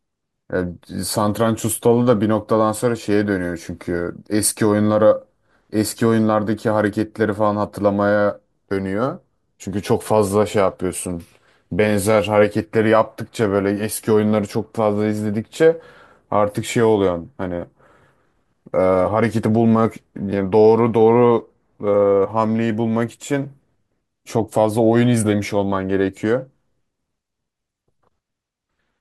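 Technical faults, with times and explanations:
Listening through the speech recording, nothing stood out as a technical problem at any point.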